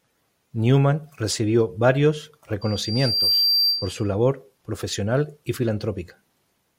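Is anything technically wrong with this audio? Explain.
Yes. Loudspeaker feedback squeal, 2.61 to 4.13 s, after "recibió varios": the microphone re-amplifies its own loudspeaker, so a 4.7 kHz tone swells within a second to sit a few dB above the speech.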